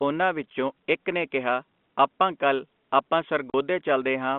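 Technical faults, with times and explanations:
3.50–3.54 s, packet loss filled with silence: the speech drops out into a 40 ms hole with hard edges. Missing packets were replaced by dead silence, a gap length that fits two 20 ms packets, cut into the narrow telephone-band G.711 sound.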